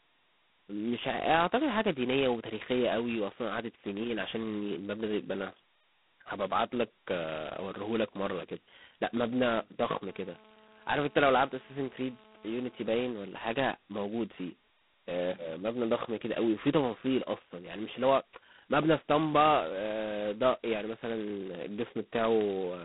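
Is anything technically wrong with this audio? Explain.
Yes. Throughout, the speech shows heavy G.726 ADPCM damage. At 16 kbit/s, each sample keeps only two bits of difference from a prediction. So a harsh, rasping hiss rides on the speech and swells with its level. The band runs 150 Hz to 3.5 kHz, with nothing above 3.9 kHz.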